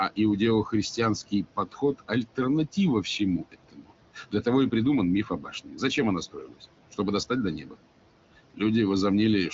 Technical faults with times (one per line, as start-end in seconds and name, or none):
0.00-9.53 noise suppressor artifacts
1.31-2.39 speech cut by the noise suppressor
3.41-4.46 speech cut by the noise suppressor
5.25-5.81 speech cut by the noise suppressor
6.33-6.63 speech cut by the noise suppressor
7.58-7.75 speech cut by the noise suppressor